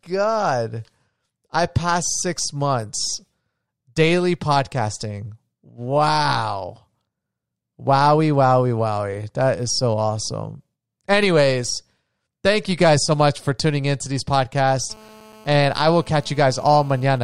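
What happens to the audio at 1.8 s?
Nothing goes wrong at 1.8 s: the speech carries on intact through that moment, with no dropout, click, distortion or other fault.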